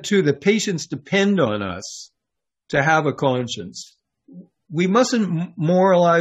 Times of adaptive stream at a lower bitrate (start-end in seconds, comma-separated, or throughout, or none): 0.94-6.21